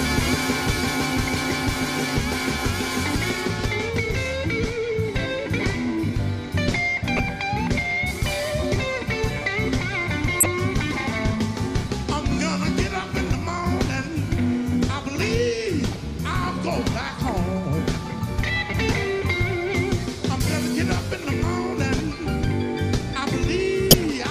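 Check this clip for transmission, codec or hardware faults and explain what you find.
Corrupt frames were decoded at five points, at 7.17–7.19 s, 10.40–10.46 s, 15.94–15.96 s, 19.19 s and 23.91–23.94 s. Flipped bits in each compressed frame were decoded anyway, misplacing energy across frequencies and producing brief chirps or noise bursts. The bursts at 10.40 s and 23.91 s peak around -5 dBFS, and the ones at 15.94 s and 19.19 s are much quieter.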